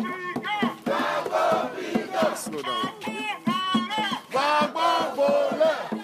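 No technical faults are audible.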